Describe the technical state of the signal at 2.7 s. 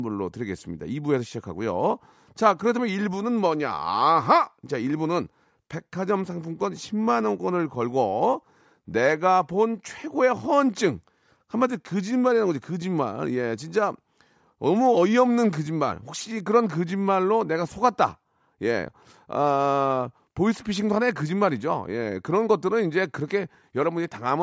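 The signal at 2.7 s is intact, with no audible fault at that point.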